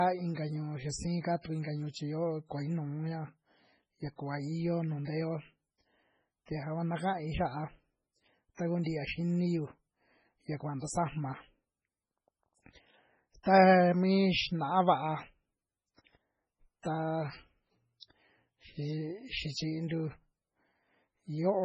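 From the first moment to the end, the speech carries heavy damage that sounds like MP3 compression, likely at a very low bitrate around 16 kbps. Nothing survives above 10 kHz, so the top sounds dull, and the remaining detail swirls and gurgles as weak frequency lines drop in and out between frames. S sounds turn metallic and chirpy. On a spectrogram the energy stops at a flat ceiling at 10 kHz, with holes flickering below it.

At 0.35 to 0.37 s, and again at 8.84 to 8.86 s, a sharp onset is preceded by pre-echo, a short hiss about 24 to 25 ms long. The coding noise is spread evenly across its transform block, so the noise meant for the loud attack also spills into the quiet just before it, and the attack sounds soft and smeared. In the waveform, low-level fuzz rises ahead of the attack. On a spectrogram, a thin broadband smear leads each onset.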